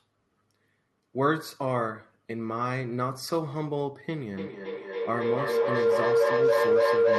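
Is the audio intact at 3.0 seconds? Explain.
Yes, the speech at 3.0 seconds is intact, with no fault heard at that moment.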